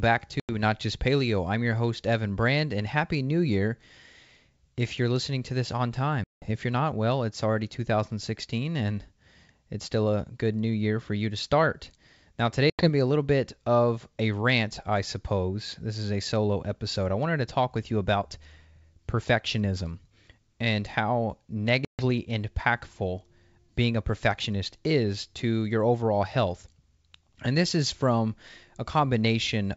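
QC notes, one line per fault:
0.40–0.55 s, 6.24–6.56 s, 12.70–12.88 s, 21.85–22.02 s: packet loss on an ADPCM call. Gaps of 90, 180, 90 and 140 ms drop to silence, which fits roughly ten to twenty lost packets each. The decoder's predictor and step size lose track. Speech returns with brief distortion before settling.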